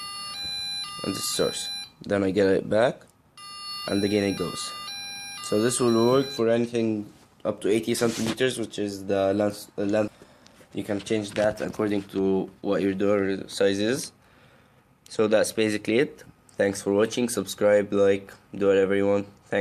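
The audio jumps forward at 10.07 to 10.09 s, a skip ahead where about a second was discarded with no silent gap, unlike a dropout, which would leave a hole. From 10.17 to 12.63 s a jitter buffer speed-up plays the sound at 109% speed, trimming roughly 0.2 s of pitch-period pieces. The pitch stays the same, which sets it apart from a faster resampled playback.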